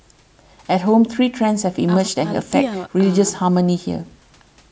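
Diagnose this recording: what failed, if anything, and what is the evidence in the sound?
Nothing failed: the sound shows no evidence of a fault, only the normal call microphone processing, with the lowest bass trimmed and nothing above 8 kHz.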